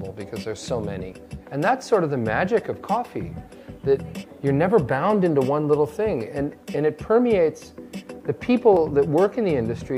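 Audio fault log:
8.77 s, dropped buffer (overrun): a brief jump where the sound lurches forward with no silent gap. Likely the software failed to collect its samples in time and the hardware overwrote them, so around 20 ms vanished and the surrounding audio was spliced directly together.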